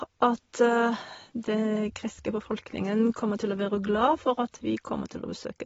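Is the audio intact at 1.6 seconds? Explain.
No, at 1.6 s the speech is dulled and warbly from likely AAC compression at a low bitrate, around 24 kbps, running throughout; a spectrogram shows nothing above 7.6 kHz.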